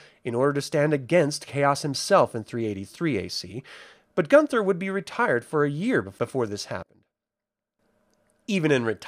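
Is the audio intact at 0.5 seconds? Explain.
Yes, at 0.5 seconds the speech plays through intact, with no audible fault at that moment.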